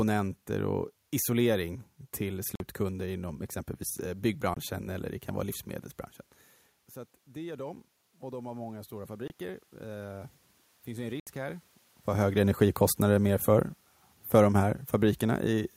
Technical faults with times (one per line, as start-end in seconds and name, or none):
2.55-2.60 Bluetooth dropout
4.54-4.57 Bluetooth dropout
7.26-11.73 automatic gain rising
9.28-9.30 Bluetooth dropout
11.20-11.27 Bluetooth dropout